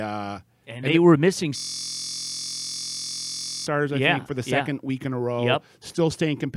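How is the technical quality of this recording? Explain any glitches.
One clear glitch spoils it. From 1.58 to 3.67 s there's a system hang loop: the system froze while the audio hardware kept replaying one 23.22 ms chunk, which fits a 1024-sample buffer. That exact repeat at 43.1 Hz turns the speech into a steady, flat buzz.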